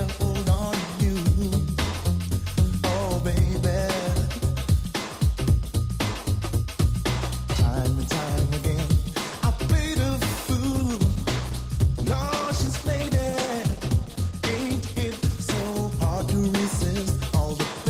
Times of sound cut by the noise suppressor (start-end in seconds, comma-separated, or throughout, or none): none